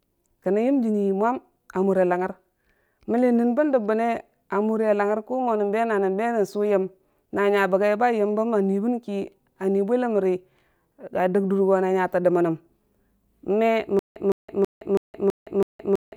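A speech recording that falls into a stutter with silent gaps from 13.99 s through to the end. A 161 ms fragment repeats six times, each followed by about 166 ms of digital silence, giving a steady 327 ms cycle. The regular spacing and identical bursts separate this from random dropouts or packet-loss gaps, which vary and carry new audio. The cause is likely a stalled player replaying its last buffer at each retry, so the intended audio is lost.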